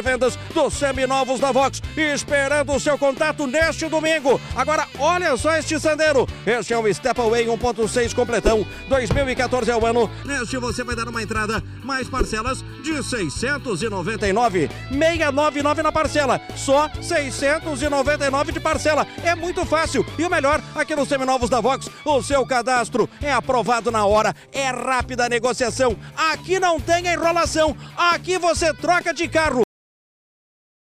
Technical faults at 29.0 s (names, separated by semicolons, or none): none